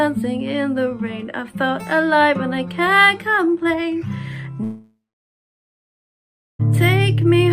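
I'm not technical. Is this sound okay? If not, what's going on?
No. At 4.63 s the connection likely stopped delivering audio for about two seconds, a long network dropout. The last sound trails off as a short fading buzz or hiss, then goes silent for about 1.6 s until 6.61 s, and the missing part never returns.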